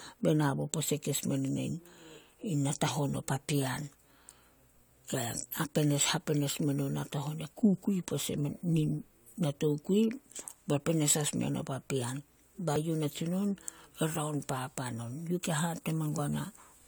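A speech clip with damaged data in a compressed stream. Five brief glitches break through the sound. They fall at 2.87 s, just before "o papean", then from 5.63 to 5.65 s, and at 8.63, 12.76 and 16.17 s. Each lasts only about 10 to 20 ms. At these points bytes in the encoded stream were lost or corrupted. The decoder misreads those frames and loses sync. It then hunts for the next valid frame header, leaving a short blip.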